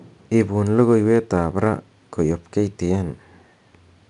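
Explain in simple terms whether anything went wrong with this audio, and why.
4-bit ADPCM compression affects the whole clip, from start to finish. This way of shrinking audio saves each moment of sound as a small 4-bit guess about how far it moved from the previous one. Those guesses are rough, so a gritty hiss rides along with the speech, loudest when the speech is loud. Sudden sharp sounds come out distorted because the steps cannot keep up. Nothing above about 10.6 kHz remains, which dulls the brightness.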